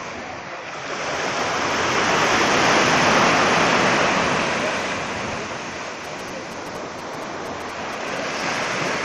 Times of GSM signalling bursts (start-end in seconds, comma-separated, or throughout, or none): 6.05-8.89